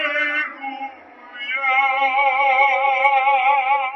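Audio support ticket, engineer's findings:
Wrong sample rate, whole clip. Everything runs slow and low: speed about 0.73x, pitch down about 5.5 semitones, both shifted together. Ratio fits 44.1 kHz material clocked out at 32 kHz with no resampling. Probable component: playback device config or missing SRC stage. Spectrogram: all harmonics and formants compressed downward by the same factor. Waveform: events stretched in time, envelopes intact.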